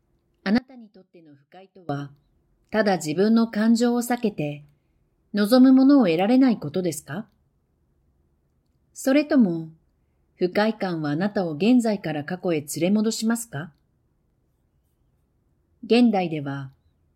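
An audio dropout to a faint residue runs from 0.58 to 1.89 s, about 1.3 s of lost speech. The signal cuts out abruptly, leaving only a faint trace far below normal level, around 25 dB down. The likely cause is a break in the feed while the downstream path stayed live.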